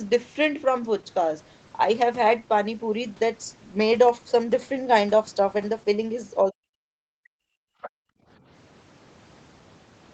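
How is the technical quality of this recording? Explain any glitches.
The recording has three echo-canceller glitches between 6.5 and 8.3 seconds. The speech stops at 8 kHz, which fits a wideband Opus call at around 20 kbps.

Speech suppressed in double talk, 6.46 to 7.16 s: the speech sinks deeply in pieces, about half a second in total. The likely cause is the canceller mistaking it for loudspeaker echo and turning everything down.

Background gated by the echo canceller, 7.36 to 8.29 s: the canceller clamps the microphone while the loudspeaker plays, so room sound drops by about 40 dB for roughly a second.

Other side's voice leaking through, 7.82 to 7.9 s: a brief scrap of a second voice slips in, well below the speech, likely residual loudspeaker echo the canceller failed to subtract.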